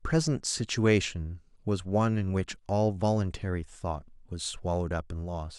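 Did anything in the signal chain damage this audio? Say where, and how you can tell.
No, nothing along the chain seems to have harmed this speech, and there's no point in it where any stage leaves a mark you can hear.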